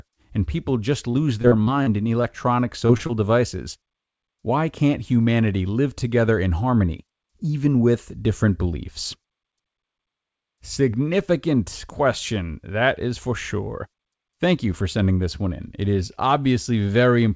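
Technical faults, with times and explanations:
1.10–2.26 s, repeated packet loss (robotic sound): six gaps, 200 ms missing in total and the longest 39 ms, each patched by extending prior audio, giving choppy, robotic texture.
2.87–2.91 s, 2.97–3.01 s, 3.07–3.11 s, short concealed packet loss: three 20 ms dropouts about 0.1 s apart, each filled by continuing the last sound, heard as brief smears.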